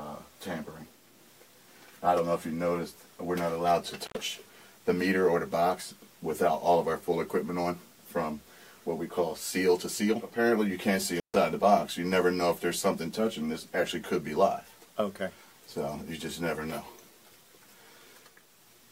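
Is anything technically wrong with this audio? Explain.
Yes. Intermittent contact breaks the signal twice, from 4.05 to 4.17 s and from 11.15 to 11.36 s. A loose plug or cable conductor briefly loses connection, so the audio drops out for about 78 ms and then about 140 ms, with crackle where the contact breaks and remakes and faint hiss while it is open. On a waveform each event is a sudden near-flat gap bordered by sharp spikes. On a spectrogram it is a dark vertical band edged by broadband clicks.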